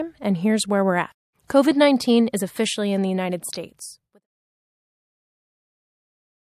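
At 1.48 to 1.50 s, pre-echo: a short hiss about 12 dB up smears 26 ms ahead of a sharp attack, as the codec's 36 ms window never switched to short blocks.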